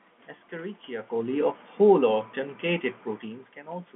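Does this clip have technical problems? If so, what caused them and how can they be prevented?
No, there are no technical faults.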